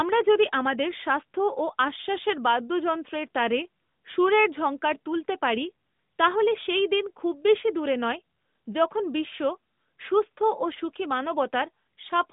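Nothing goes wrong anywhere in this speech recording; it just has the narrow, phone-call character of the AMR narrowband mobile codec at 12.2 kbps, with the band running from 150 Hz to 3.7 kHz and only the light colouring that comes with it.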